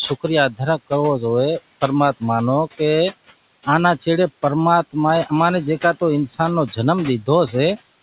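Speech over a narrowband call, with nothing above 4 kHz, which points to a G.711-style telephone codec. Throughout, there are noise suppressor artifacts: the room noise, sitting about 15 dB under the speech, gets pushed down by about 16 dB in the pauses and swells back under the talking.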